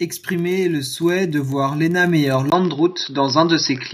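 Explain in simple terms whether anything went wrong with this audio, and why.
At 1.02 seconds, just before "de voir", the speech and the background both get noticeably louder at once, as if someone turned a knob up a notch. This is a microphone volume stepped up. The calling software decided the microphone was too quiet and raised its input volume in a single jump. Because the boost happens at the microphone, everything it picks up gets louder together, right in the middle of speaking.

From 2.5 seconds to the end, the speech sounds duller and boxier, although its loudness stays about the same. A tiny gap, around 20 milliseconds, marks the moment of change, and a faint new background noise appears underneath. This points to input switched to a poorer device, most likely because the system swapped to a different microphone or a headset's call mode, which carries a narrower range of sound and brings its own noise.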